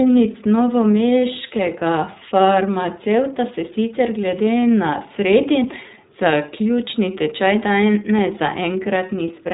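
Throughout, the speech sounds muffled, slightly rough and synthetic, with nothing above 4 kHz: plainly audible iLBC codec damage, fitting 30 ms frames at about 13.3 kbps.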